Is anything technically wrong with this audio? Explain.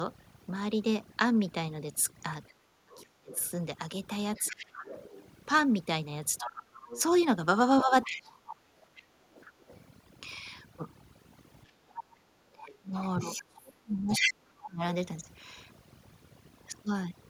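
Yes, there are four distinct problems.

Overdone noise removal runs through the whole clip. The background sits near silence with twinkling specks, and quieter parts of the voice were removed along with the estimated noise. A spectrogram shows a blank floor scattered with isolated bright dots, and the fainter harmonics are ragged or missing.

The other side's voice leaks through from 2.48 to 9.76 s, about 15 dB below the talker, and again from 11.67 to 14.33 s at roughly the same level as the talker. This is likely loudspeaker echo that the echo canceller failed to remove. On a spectrogram it appears as a second set of harmonic stripes that don't follow the main voice's pitch.

Speech is suppressed in double talk from 2.68 to 4.88 s, 6.4 to 8.79 s and 12.53 to 14.83 s. The talker dips and breaks up, losing something like 30 to 40 dB at worst, and each stretch adds up to one to two seconds of damage. 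The likely cause is the canceller pulling everything down while both sides talk. The waveform shows sudden notches in the envelope.

The echo canceller gates the background from 9.07 to 9.58 s and from 11.71 to 12.25 s. The room sound drops by about 11 dB and then about 9 dB for a few hundred milliseconds each time, then returns. On the waveform these show as brief gaps in the noise floor, and on the spectrogram as short darker bands across all frequencies.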